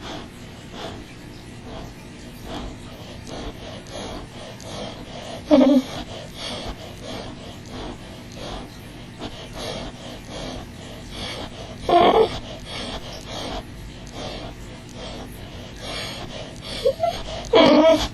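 Channel delay (comb filtering) runs the whole way through: one side lags about 20 ms, so the mono sum gets evenly spaced notches from around 30 Hz upward, leaving everything rough and slightly doubled.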